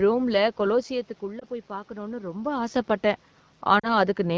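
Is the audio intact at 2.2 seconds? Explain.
No. From 0.69 to 2.89 s the automatic gain control is raising its gain by about 4 dB after the input fell by about 11 dB. At 2.2 s the voice and the room noise behind it are still swelling together.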